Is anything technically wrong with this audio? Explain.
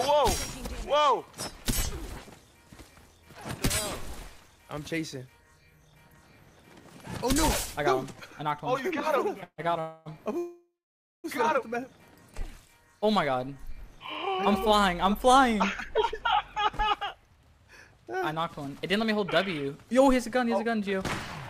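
Yes, there are two separate problems. First, a run of three call audio freezes close together: 9.43 to 9.60 s, 9.80 to 10.08 s, and 10.38 to 11.26 s. Each time the sound hangs on a buzzy continuation of whatever was playing, then fades. The first drops to silence for its last 70 ms, and the long third one goes quiet for about 550 ms. The likely cause is delayed packets draining the jitter buffer. When they arrive, the audio resumes where it left off, so nothing is lost. The timeline is just pushed back by 147, 256 and 862 ms.

Later there's jitter buffer speed-up, from 16.59 to 19.19 s and again from 19.62 to 20.95 s. The buffer had built up more audio than it wanted, so the receiver trimmed out tiny pitch-period-sized slices over and over to catch up. That brings playback to 106% and then 105% speed without changing the pitch. Together the two stretches remove roughly a fifth of a second, and the sound there comes across as slightly rushed.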